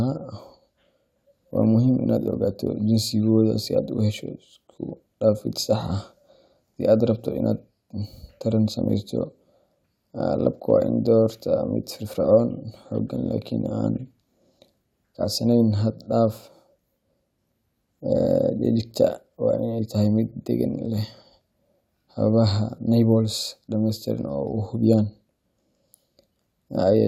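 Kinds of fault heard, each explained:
Nothing here trips the ear; the speech comes through without any dropouts, clicks, glitches or other faults worth flagging.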